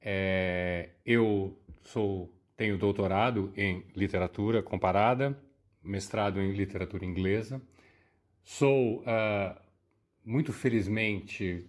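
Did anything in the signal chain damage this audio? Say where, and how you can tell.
No, nothing along the way seems to have left its mark on this recording, so there's no stage of the chain to point a finger at.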